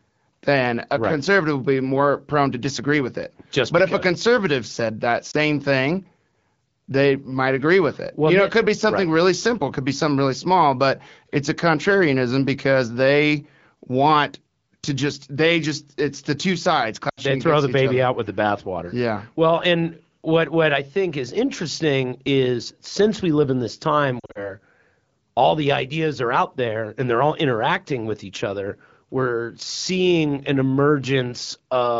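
A brief dip at 5.31–5.37 s after "a conservative said that", a drop to near silence at 17.10–17.20 s after "it's the two sides", and a broken warble at 24.19–24.50 s after "live in this time" are lost AMR speech frames. The wideband decoder concealed the corrupted frames by reusing its last good settings at falling gain. About 20 ms was lost in the first, 80 ms in the second, and 120 ms in the third, scattered in runs of up to 40 ms.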